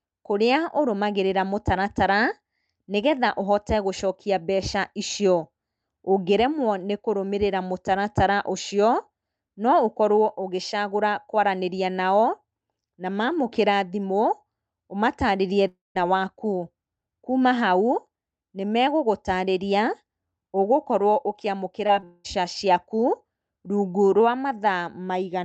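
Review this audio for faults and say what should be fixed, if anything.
Long network dropout, 15.67 to 15.97 s and 22.04 to 22.26 s: audio stops arriving, most likely from a network outage, and the receiver stretches the last sound into a fading buzz before the real signal resumes with that stretch missing. In the first, about 0.28 s is lost and the fill gives way to roughly 0.16 s of silence. The second, about 0.2 s, is filled throughout with no silent gap. On a spectrogram, harmonics blur into smooth, decaying bands, and in the first event these end in a blank column. In the first event, the waveform dwindles to a flat line before the signal returns. Prevent it with a more stable connection and a jitter buffer that can ride out longer gaps.

Short concealed packet loss, 21.87 to 21.90 s and 22.00 to 22.04 s: in each, about 20 ms of audio missed the decoder, and the receiver patched the hole by extending the preceding sound from its pitch or as shaped noise, then crossfaded back. 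Each is a brief smear or wobble. The second leads straight into the 22.04 s dropout, so that passage degrades from a small glitch to a long fill. A spectrogram shows short stretches of smoothed, repeated harmonic texture within the call path's band, which tops out near 8 kHz. The waveform shows a slightly too-regular cycle and no sharp edge. Prevent it with forward error correction and packet redundancy on the lossy link.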